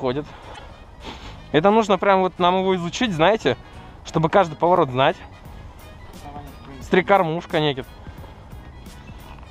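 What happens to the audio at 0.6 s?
A broken MP3 bit reservoir is the likely cause of the disturbance from 0.54 to 0.60 s. After a cut, frames that borrowed bits from earlier data decode from the wrong bytes, so the audio skips ahead and is garbled for about two 26.1 ms frames.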